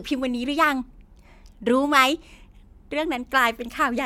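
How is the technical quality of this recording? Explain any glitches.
No glitches or technical faults can be heard anywhere.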